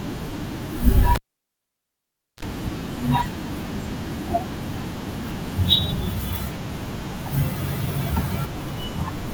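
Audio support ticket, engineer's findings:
Pop at 1.15 s, near silence until 2.43 s, brief 60 Hz mains buzz lasting about 30 ms, then a second pop as speech returns. Cable pulled and plugged in: live lead disconnected for 1.23 s. Tip-only contact on reinsertion picked up hum.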